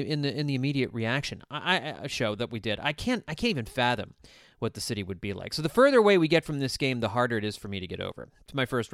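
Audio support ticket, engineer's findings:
No audible fault found on this speech capture; nothing to attribute to any component in the chain.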